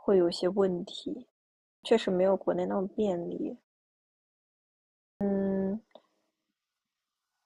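Clipped start after a pause at 1.70 s and 5.08 s: the output wakes late after silences of 0.47 s and 1.52 s, swallowing 134 ms and 127 ms of onset.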